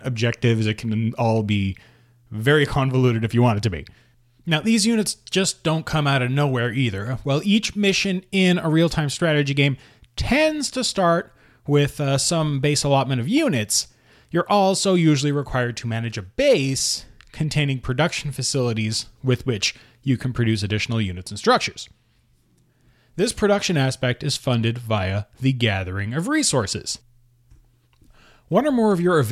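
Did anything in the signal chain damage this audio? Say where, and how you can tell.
No, nothing in this speech recording stood out as damage from any stage of the signal chain on listening.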